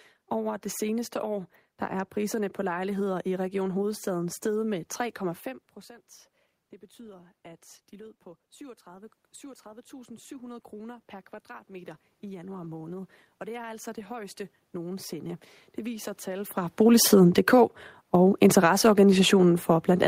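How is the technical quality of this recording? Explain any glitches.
The recording has two level faults, both from automatic gain control rather than from anything happening in the room.

From 9.4 to 16.6 s there is automatic gain rising. The gain control judged the input too quiet and slowly raised it by about 11 dB, so the voice and the room noise swell together.

From 18.06 s to the end there is automatic gain falling. The gain control judged the input too loud, or its background noise too strong, and eased its gain down, so the sound sinks along with its background.

These differ from the talker's own movements near 5.5 s and 16.5 s. There only the voice level shifts while the room noise stays put.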